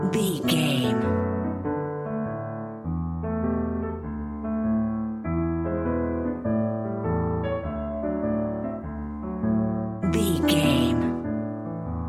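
Nothing in the signal departs from its expected technical behaviour at any point.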